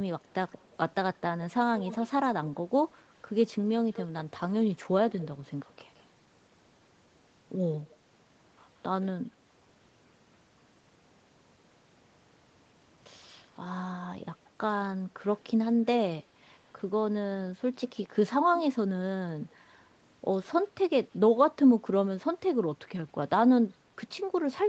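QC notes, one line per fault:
0.2–1.18 s, 1.78–1.96 s, 5.11–6.04 s, 7.91–7.96 s: echo leak. A copy of the speech trails about 170 ms behind. It is very faint in the first and last spans and roughly 15 dB down in the middle two. This is likely loudspeaker pickup that the far end's echo canceller failed to remove.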